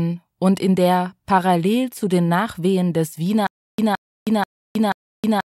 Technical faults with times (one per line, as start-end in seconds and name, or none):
3.47-5.54 stutter with silent gaps